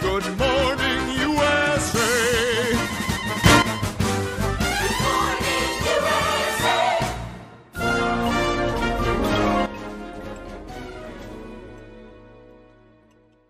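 Two sudden gain jumps here: the level leaps up about 10 dB from 3.44 to 3.62 s, then drops about 11 dB at 9.66 s and stays down, background noise moving with it, likely unramped digital gain changes.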